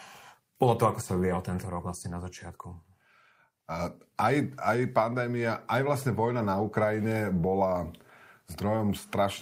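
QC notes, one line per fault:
No faults heard on this speech clip; nothing to log.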